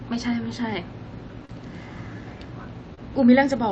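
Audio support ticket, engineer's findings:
Short concealed packet loss, 1.45–1.51 s and 2.95–2.99 s: brief smears where roughly 40 ms and 20 ms never arrived, jitter buffer/decoder stretching the last sound to cover. Call path sounds like Opus, band-limited near 8 kHz.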